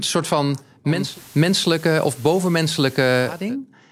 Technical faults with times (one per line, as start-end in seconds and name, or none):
0.84-3.57 digital radio blending to analogue